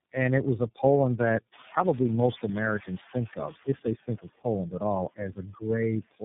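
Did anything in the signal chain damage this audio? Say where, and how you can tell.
Yes. The call-processing stage ran a noise suppressor over the whole clip. Between phrases the room noise, which rises by about 22 dB near 1.5 s, drops by about 13 dB and then climbs back under each phrase. That pumping is a noise suppressor artifact from per-frame gain applied to each band. On a spectrogram the noise floor darkens in the gaps and brightens under the speech, with a speckled, patchy texture in the leftover noise.

The codec stage shows tandem speech coding. The roughness and muffling point to three low-rate speech codecs in a row, each re-encoding the degraded output of the one before. Every conversion adds its own distortion, so the speech ends up rougher, noisier and more muffled than any single link would leave it. The spectrogram shows nothing above 3.7 kHz, smeared and blurred formant bands, and a grainy noise layer under the harmonics.

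Speech was also cut by the noise suppressor between 5.35 and 5.62 s, just after "at all". The suppressor mistook part of the speech for noise and lowered it along with the background, by up to about 11 dB, over roughly a tenth of a second in total. The affected sounds come across as swallowed. On the waveform, the envelope dips suddenly there. On the spectrogram, energy vanishes in bands that the neighbouring frames still carry.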